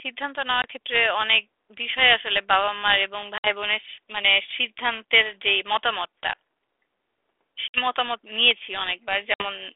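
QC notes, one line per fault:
0.62 s, 3.38 s, 7.68 s, 9.34 s, packet loss on an ADPCM call: the sound drops into a hard-edged silent hole, a short 20 ms gap at 0.62 s and 60 ms gaps at the other three, and then comes back slightly distorted before settling. Each gap fits roughly one or three lost packets, and during the silence the decoder's adaptive predictor and step size drifted from the sender's. The telephone band of about 300 Hz to 3.5 kHz from the 32 kbit/s G.726 ADPCM carries that recovery.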